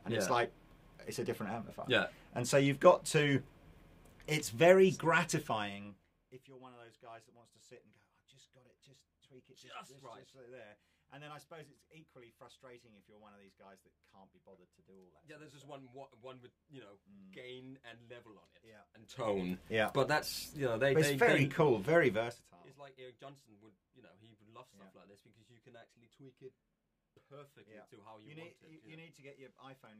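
Zipper noise occurs twice in this audio. From 5.39 to 6.50 s the level drops by roughly 25 dB in steps of about 2 dB, heard as a ticking at around fifteen per second. From 18.95 to 19.41 s it rises by a similar amount in the same size of step, ticking much faster, around forty per second. The gain is being changed in unsmoothed increments, each step putting a small click into the signal.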